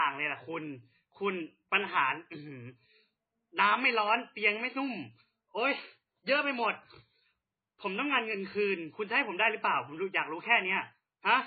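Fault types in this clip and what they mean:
Low-bitrate audio saved at a high bitrate: the speech was likely squeezed through a very low-bitrate MP3 encode, consistent with around 16 kbit/s, then re-saved at a high bitrate. Nothing above 4.5 kHz remains throughout, and the first encode's artefacts persist unchanged.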